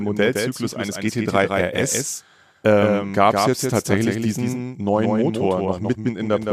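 A doubled audio track runs through the whole clip: a second, full-band copy of the speech trails by roughly 150 ms, about 5 dB quieter, with no decay or room colour. This is likely a second capture through a slower path mixed in with the original.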